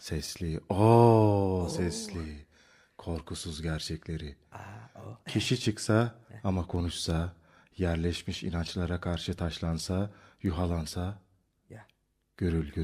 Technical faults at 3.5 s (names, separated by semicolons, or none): word clock ticks